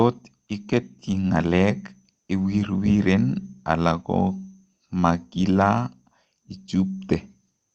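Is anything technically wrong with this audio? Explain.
No, nothing in this speech is technically wrong. It has passed through a call codec and jitter buffer working as intended, with the top end stopping at 8 kHz, which fits Opus running at about 32 kbps.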